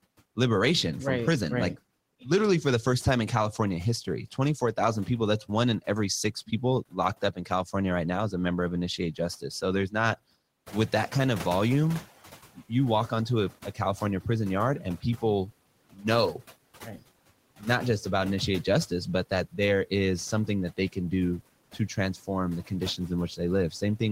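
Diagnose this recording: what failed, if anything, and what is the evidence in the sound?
Noise suppressor artifacts run through the whole clip. In call processing, frame-by-frame band gains cut the steady background by about 17 dB, so the noise sinks between the words and rises under them.

Speech cut by the noise suppressor occurs at 5.46–7.74, 8.98–10.17, 12.55–14.26, 14.8–15.23, 15.93–17.63 and 20.47 s to the end. The suppressor mistakes quiet speech for noise, so soft sounds drop by up to about 18 dB and sound swallowed.

The noise suppressor is catching up from 10.66 to 12.14 s. The room noise rises about 11 dB near 10.5 s, and the lagging estimate lets it through with only about 10 dB reduction before it sinks over 1.48 s.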